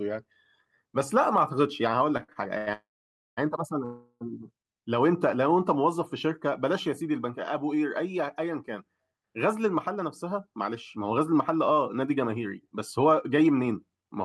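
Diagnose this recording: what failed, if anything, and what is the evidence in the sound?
The trouble starts on the network side. From 2.17 to 2.69 s the speech hitches four times, which is repeated stalls (stutter). Packets were showing up late, so the jitter buffer kept running dry, and the receiver stretched the last bit of sound to cover each wait. The longest patch is about 94 ms, and roughly 38% of that half-second is filled-in sound. Nothing is actually lost, but it drags and judders.

Right after that come two call audio freezes. From 2.73 to 3.39 s the sound holds as a fading continuation and then sits silent for about 540 ms of the 640 ms gap. From 3.85 to 4.23 s there's a shorter 357 ms hold with only about 60 ms of silence. Each time, the speech resumes exactly where it stopped, so the delay grows by the length of the gap. The likely cause is packets held up in transit until the buffer emptied.

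Later, from 9.88 to 14.11 s, the speech runs about 7% fast at unchanged pitch. That's a jitter buffer speed-up. The buffer was sitting on more audio than it wanted, so the receiver trimmed tiny pitch-period slices over and over to claw back the latency, roughly 0.3 s in total. The result sounds a bit rushed rather than glitchy, which is the giveaway that it's buffer management and not a codec problem.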